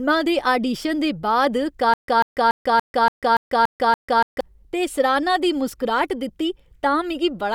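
From 1.94 to 4.41 s, after "दे आडीशन दे बाद", a stutter with silent gaps sets in: a 141 ms fragment repeats eight times, each followed by 145 ms of digital silence, until "ते सराह्ना दी". This likely comes from a stalled stream replaying its last fragment at each retry. Unlike a seamless loop, dead silence separates the bursts, and the audio in between is lost.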